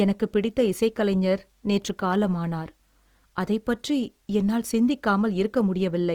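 Throughout the speech, tones sound rough, grainy and noisy, with plainly audible damage. Content reaches about 20.2 kHz. This is likely Opus compression in its CELT music mode, filling starved bands with noise or folded copies, which fits a low bitrate near 24 kbps.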